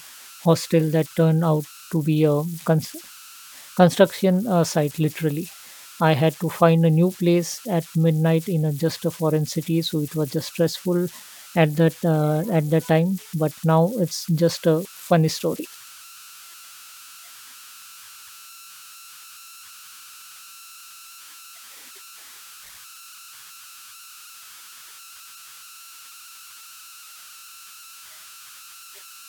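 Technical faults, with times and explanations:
Throughout, converter idle tones: a whistle near 1.5 kHz hangs in the pauses between phrases, and under the speech it turns into a grainy hiss, about 23 dB below the signal. The converter was running without dither, so when the input dropped toward silence its delta-sigma loop settled into repeating bit patterns, and those cycles come out as a steady tone set by the input's small offset.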